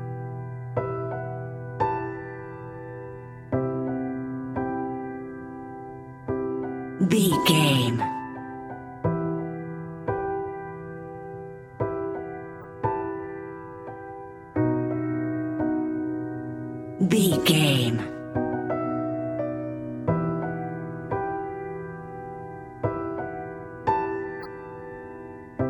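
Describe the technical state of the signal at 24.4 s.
A corrupt frame decoded from 24.40 to 24.46 s: for about two consecutive compressed frames the bitstream arrived with damaged bits, and the decoder rendered them instead of discarding or concealing them. The misread gain values and spectral codes put energy where it doesn't belong, so for roughly 60 ms the audio carries a short blip of misplaced noise, peaking at around -30 dBFS.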